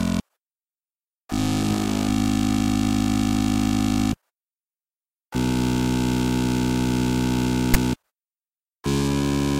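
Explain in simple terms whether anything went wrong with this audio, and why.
At 7.74 s there's a quick, harsh rasp, a case of file tags played as audio: text stored in the file was read out as sound, giving a lopsided burst of static.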